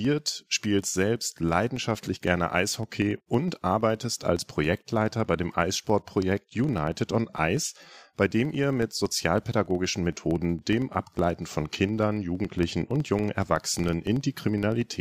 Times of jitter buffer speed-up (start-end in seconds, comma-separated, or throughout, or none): none